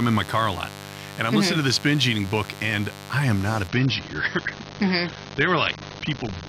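A steady, raspy buzz sits under this speech recording from start to finish, at roughly 15 dB below the speech. This is mains buzz: sharp switching spikes, such as from a dimmer, rectifier or unshielded cable, enter twice per 50 Hz cycle and spread harmonics up into the kilohertz range. At 3.68 s the treble suddenly collapses with no gap. Nothing remains above 6.6 kHz, and the sound turns duller and more smeared until the end. That sudden shift is an adaptive stream at a lower bitrate. The player switched to a leaner encode when the connection slowed, and the result fits a drop from around 96 kbit/s AAC to around 24 kbit/s.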